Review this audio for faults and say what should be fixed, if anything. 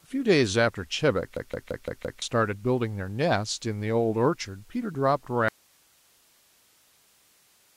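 A system hang loop hits first: the computer or its audio driver stalled while the sound hardware kept replaying the same ring buffer. From 1.37 s to 2.22 s, one 171 ms slice of speech repeats five times at about 5.9 per second, which fits an 8192-sample buffer. It produces a machine-gun stutter, and roughly a second of real audio is lost behind it. To prevent it, fix the stall in the driver or the process feeding the buffer, and have the device output silence on underrun instead of recycling stale data.

An audio dropout to a faint residue follows, most likely because the signal feeding the chain was lost while everything after the break stayed live. At 5.48 s the speech cuts off abruptly, with no pause or fade, and only hiss about 35 dB below the speech level remains until the clip ends. To prevent it, secure the source connection or capture stream, and monitor input level so a lost signal is caught and re-recorded.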